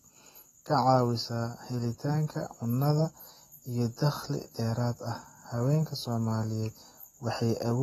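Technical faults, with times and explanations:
Throughout, AAC compression: the speech sounds dull and smeared, with nothing above 14 kHz and a plainly audible warbling, fizzy texture on sustained sounds and sibilants. This is likely the work of an AAC-LC encoder. It quantises each frame's frequency lines against a hearing model, and when it is short of bits it drops the top band and thins out or noise-fills what remains. The damage fits a low rate near 32 kbps.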